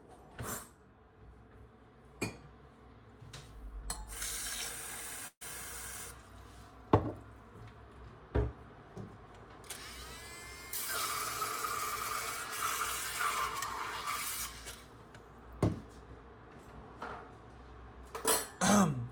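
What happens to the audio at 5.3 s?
A burst of packet loss runs from 5.27 to 5.43 s. The receiver lost roughly 140 ms of audio and filled the gap by extending the last sound it had for about 134 ms, turning it down until it reached near-silence. The audio then resumes further along, with the missing stretch skipped. It sounds like a brief fading hiss or held buzz followed by a jump. On a spectrogram this shows as frozen, smeared bands that decay before an abrupt break. The waveform envelope tapers and then restarts suddenly.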